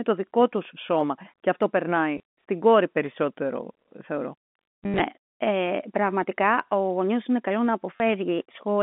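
At 2.18 to 2.20 s, between "αυτό περνάει" and "στην κόρη", packet loss with last packet repeated covers 20 ms. At 4.84 to 5.00 s, 120 ms is lost in patches, the longest run 80 ms, and this fits 10 ms packets. The looped packet buzzes at 100 Hz, like a robotic stutter. A spectrogram shows frozen, comb-like harmonics, and the waveform shows identical repeated cycles. The last loss falls at 7.96 to 8.00 s, after "γονιό είναι καλό να". All of it sits within the narrow G.711 telephone band.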